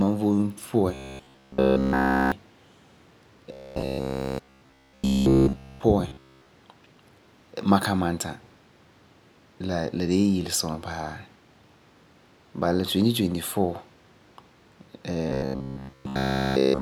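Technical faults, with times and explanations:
0.94–2.32 s, 3.52–5.83 s, 6.09–6.49 s, 15.29–16.81 s: robotic sound from repeated short buffers. Speech becomes a rigid metallic buzz near 66.7 Hz, likely from a 15 ms chunk looped while new audio is missing.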